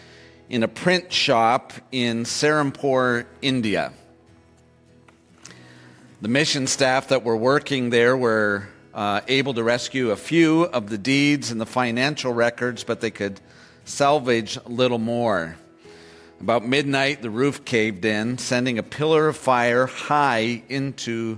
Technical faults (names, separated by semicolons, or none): none